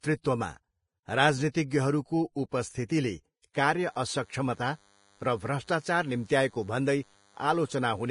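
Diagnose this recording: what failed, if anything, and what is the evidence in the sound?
The speech is heavily hissy and grainy throughout, with roughened tones and smeared consonant onsets, and nothing survives above 10.5 kHz. This is a codec-stage fault, likely Vorbis compression at a low setting, consistent with a bitrate around 30 kbps. The encoder keeps a smooth spectral floor but quantises the residue so coarsely that fine treble detail turns into noise of similar energy. The low cut-off is its way of saving bits.

Short bursts of hiss lead into sharp onsets at 1.52–1.55 s, 2.49–2.52 s, 2.88 s and 3.53 s, and those attacks sound softened. This is pre-echo, also from the codec stage. Each transform block spreads its quantisation noise evenly across its whole length. When an attack lands late in a block, noise sized for the loud part also fills the quiet gap before it. Here that produces a smear of 16 to 31 ms.

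From 3.79 s to the end a steady, thin 100 Hz buzz rich in harmonics sits underneath, at roughly 35 dB below the speech. This is DECT cordless phone buzz, picked up in the analogue wiring. A nearby DECT handset or base station transmits a radio burst every 10 ms, and the audio circuitry rectifies those bursts into audible pulses at that 100 Hz rate.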